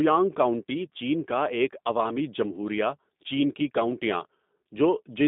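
G.729 codec throughout: the speech, rebuilt from a vocal-tract filter and sparse pulses within 200 Hz to 3.7 kHz, sounds plainly rough and synthetic, fitting 8 kbit/s.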